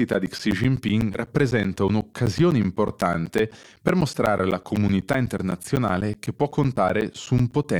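A steady ticking runs through this speech clip from 0.14 s to 7.64 s: a small pop every 0.125 s, eight per second, some seventy in all, audible only where the voice is sounding. These are periodic USB or driver dropouts. Something stalls the audio path on a fixed schedule, and each stall drops about 10 ms of signal that is replaced with silence, so the waveform is cut abruptly at evenly spaced points.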